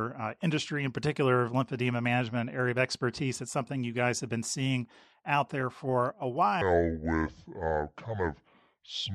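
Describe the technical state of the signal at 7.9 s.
At 7.9 s you're inside a section at the wrong speed, running from 6.62 s (just after "out there for a") to the end. It plays at 0.652 times normal speed, likely from a wrong-clock mismatch, so the speech drags and drops about seven semitones, deep and slow.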